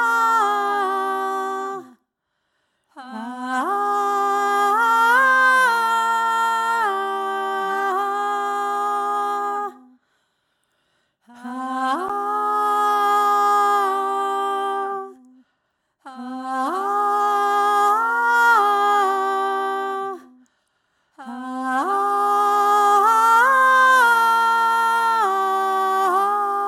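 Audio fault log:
12.09 s, CD skip: the laser jumped to another turn of the disc spiral, giving a tick, a brief mute of about 10 ms, and playback resuming elsewhere.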